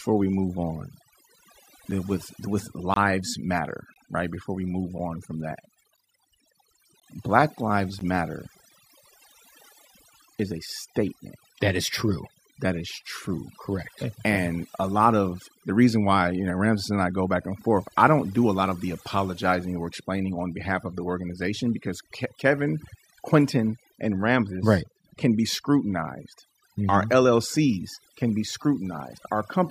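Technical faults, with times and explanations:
Throughout: overdone noise removal. The noise suppressor was set far too aggressively, so it cuts individual frequency bands down or out whenever they sit near its noise estimate. Quieter parts of the speech fall below that threshold and are stripped along with the hiss. Between phrases the background drops and breaks up into sparkling, twinkling specks where isolated bands flicker on and off.
0.93, 1.91, 2.94–2.96, 3.94–3.96, 4.98, 5.97, 7.00, 7.99: gap between stream segments. Segment time stamps leave a small hole at each join, roughly every second, which points to segments about 1 s long, and the player fills each hole with silence. The result is a hard-edged dropout lasting 3.3 to 23.9 ms. One falls just before "with with", one just after it and before "matter right", and one between "we move" and "on from that". No audio is missing. Each gap only inserts silence.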